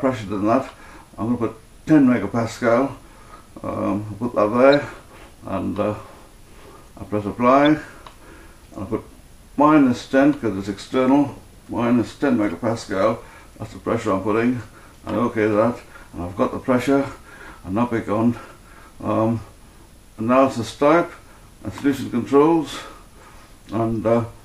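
Corrupt frames are decoded at 4.71 to 4.74 s, 7.65 s, 12.50 s and 15.14 s. Flipped bits in each compressed frame were played as valid, putting energy at wrong frequencies and giving short chirps or blips. The loudest are at 4.7 and 7.65 s, and the faintest is at 12.5 s.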